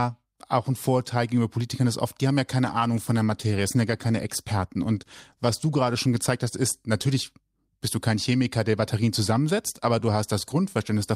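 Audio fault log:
2.64–8.43 s, call bitrate drop: after "oft die haben ja" it falls from 64 to 22 kbps, so coarser coding and lost highs leave the speech muffled until it recovers.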